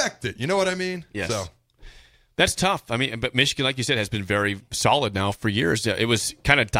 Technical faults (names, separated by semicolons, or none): none